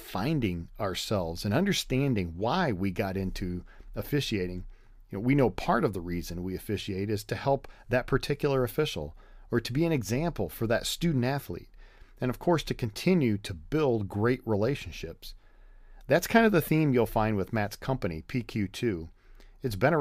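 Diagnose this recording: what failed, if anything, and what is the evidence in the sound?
Nothing in the speech stood out as a failure on listening, so there is no stage to point to and no evidence to cite.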